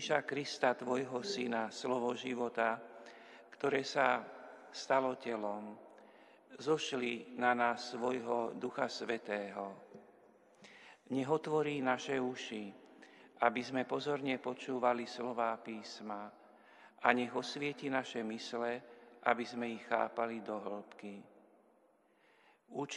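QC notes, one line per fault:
No faults found on listening; nothing to log.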